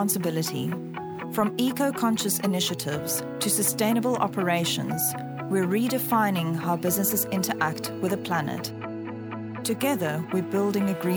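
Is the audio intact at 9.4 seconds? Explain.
Yes, the audio is intact at 9.4 seconds, with no dropout, click, distortion or other fault at that moment.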